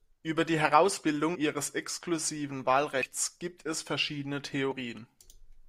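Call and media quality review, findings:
Compressed frames skipped, speech track, three events. 1.34 s, just before "ihres exklusiven": about 70 ms of audio missing. 3.01–3.05 s, between "ihres exklusiven" and "gibt es verschiedene": roughly 100 ms lost. 4.71 s, after "gibt es verschiedene": around 40 ms gone. Probable component: decoder dropping missing or corrupt frames. Playback jumps forward by whole frames.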